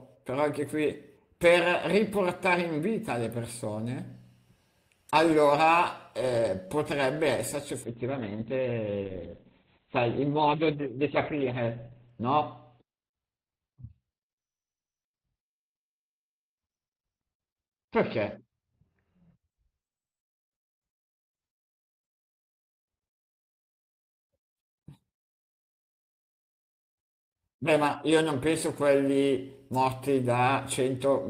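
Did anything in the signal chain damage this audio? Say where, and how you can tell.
Yes. A call bitrate drop at the network and codec stage, 7.84 s to 22.39 s: the bandwidth estimate fell, pushing the encoder from 32 kbps to 8 kbps for 4.24 s at worst. The speech turns rough and muffled as coding coarsens and bandwidth shrinks from 20 kHz to 4 kHz.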